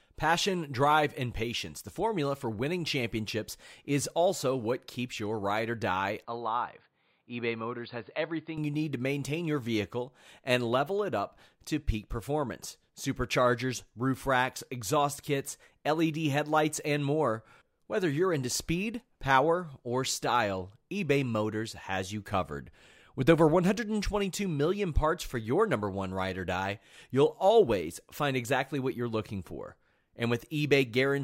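In this speech clip, the sound turns dull and boxy from 6.25 s to 8.58 s, just after "your ride or die" and until "you need to maintain". Nothing above 4.8 kHz gets through, the level falls by about 5 dB, and a faint new background noise sits well below the voice, with no gap at either switch. The likely cause is the input switched to a poorer device, a narrower-band microphone with its own tone and noise, and then back.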